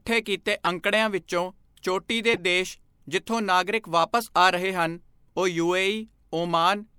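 Corrupt frame decoded at 0.65–0.67 s and 2.33–2.38 s in this speech clip: damaged compressed data was decoded anyway, misplacing energy across frequencies as short bursts peaking around -10 dBFS, the first fitting one bad frame, the second several consecutive frames.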